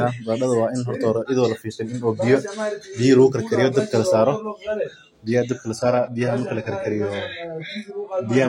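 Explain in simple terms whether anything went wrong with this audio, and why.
Adaptive stream at a lower bitrate, from 5.77 s to the end: the stream suddenly switched to a smaller, lower-quality version, as happens when a connection slows. Everything above 11.5 kHz disappears, so the speech turns dull, with no gap at the switch.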